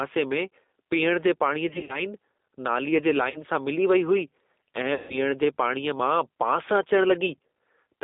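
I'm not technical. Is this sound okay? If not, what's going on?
No. Several things went wrong on the way. The first is likely gain pumping: the microphone level was set far too high, so an automatic limiter keeps yanking it down whenever the talker gets loud. Loud and soft parts end up closer in level, so everything sounds squashed.

The call was also squeezed through the G.729 codec, a phone-call format that rebuilds speech from a rough model instead of sending it faithfully. Everything sits in a narrow telephone band, and the damage is plainly audible: the speech comes across rough, slightly robotic and thin.

Finally, there are three spots of VoIP packet loss concealed by the speech codec. Pieces of the call never arrived, and the decoder filled each gap by stretching out the last sound it had and letting it fade, which gives a brief buzzy or smeared patch that stays weak for a moment afterwards. 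The first runs from 1.69 to 2.03 s with small bits missing here and there. The second, right after "नालीअ जे", is short, from 3.30 to 3.42 s. The longest runs from 4.94 to 5.33 s.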